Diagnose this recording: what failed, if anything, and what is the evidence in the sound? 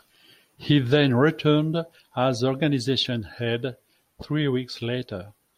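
Nothing here points to a failure at any stage of the chain, so there's no fault to diagnose in this speech recording.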